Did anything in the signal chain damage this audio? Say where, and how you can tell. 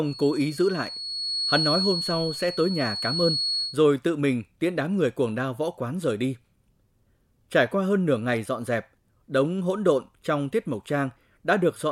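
Yes. A feedback whistle runs from 0.0 to 3.78 s, ending just before "tự mình tiễn đám": a thin, steady 4.4 kHz tone sits a little below the speech level and swells and fades slowly in level. The likely cause is an acoustic loop between loudspeaker and microphone held right at the edge of feedback.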